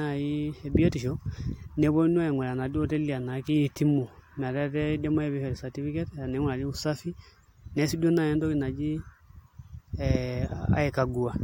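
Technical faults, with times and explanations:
No technical faults can be heard anywhere in the speech signal.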